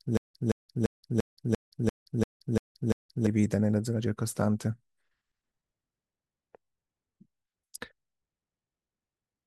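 Right from the start, and already going when the clip opens, there's a stutter with silent gaps running up to about 3.27 s. A burst of roughly 172 ms of speech replays nine times, each followed by about 172 ms of dead digital silence, so it pulses at an even 344 ms period. That's likely a stalled player or stream re-serving its last fragment on each retry and then running dry, and whatever should have played there is simply gone.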